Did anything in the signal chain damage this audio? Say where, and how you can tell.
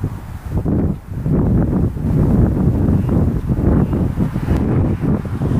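Yes: from 2.07 to 4.57 s a doubled audio track appears, a dry, equally loud copy about a second behind, likely from a second, slower capture path or a misaligned edit.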